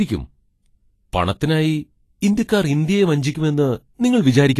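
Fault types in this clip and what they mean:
Vorbis compression: The speech sounds hissy and grainy throughout, with roughened tones and smeared consonant attacks, and nothing above 14.2 kHz. This points to coarse treble quantisation replacing fine detail with noise, likely from Vorbis encoding at a low bitrate near 32 kbps.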